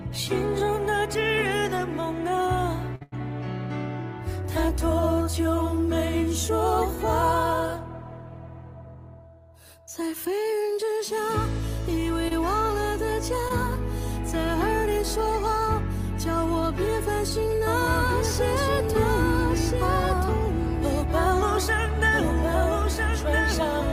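Right at 2.95 s there are two back-to-back short stalls from a late packet, running to 3.03 s and then to 3.14 s. The jitter buffer ran dry, so the last sound got held for about 54 ms and then 91 ms before resuming where it left off. Nothing's lost, just a stretched moment with a faint buzzy dip.

Then come two short concealed packet losses, at 12.28 to 12.33 s and 13.49 to 13.52 s. Each time about 20 ms of audio never arrived, and the decoder patched the gap by extending what came before. You hear a quick smear or wobble, and a brief transient can get swallowed.

From 17.67 s to the end there's a doubled audio track. A second full-band copy trails roughly a second and a half behind, about 5 dB quieter, with no room colour. It kicks in abruptly, likely from a slower second capture path picking up the same signal.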